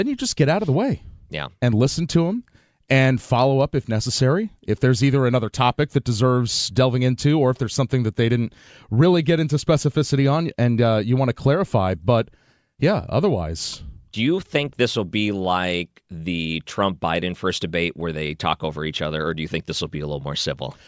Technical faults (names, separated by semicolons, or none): none